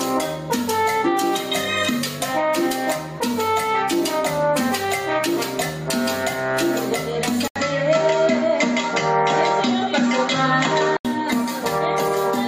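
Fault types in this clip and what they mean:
Input switched to a poorer device: after an 80 ms gap, nothing above 7.6 kHz and fresh background noise about 40 dB down, unlike a filter; likely another microphone.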